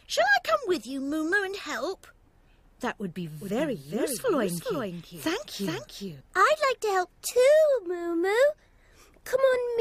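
The clip has a doubled audio track from 3.41 s to 6.21 s. Across that span a second, full-band copy of the sound runs roughly 0.4 s behind the original at around 5 dB lower, with no decay or room colour, so it reads as a flat, exact repeat rather than an echo. It cuts in and out abruptly at both ends. The likely cause is the signal being captured a second time through a slower path, or an edit leaving two misaligned copies.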